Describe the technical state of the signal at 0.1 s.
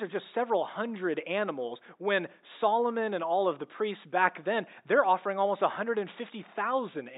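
The audio is intact at 0.1 s, with the room's background noise present, sitting about 53 dB below the speech.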